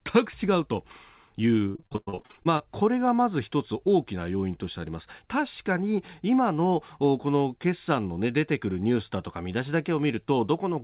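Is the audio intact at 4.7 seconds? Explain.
Yes, the speech at 4.7 s is intact, with no dropout, glitch or distortion, only the narrowband sound of the call path, which carries nothing above 4 kHz.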